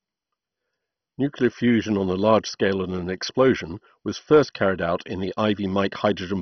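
Throughout the speech, nothing is heard above 6.1 kHz, so it sounds dull. The remaining bands gurgle and grate. They are coarsely quantised and flicker. The likely cause is heavy MP2 compression, whose bit starvation switches upper sub-bands off. The damage fits a rate near 32 kbps.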